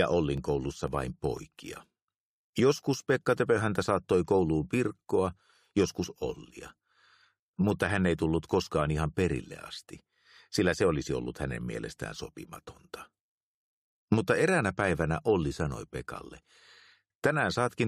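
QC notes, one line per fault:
0.38–3.87 s: periodic USB or driver dropouts. A tick every 0.5 s, each a millisecond or so of silence where the driver stalls on a timer.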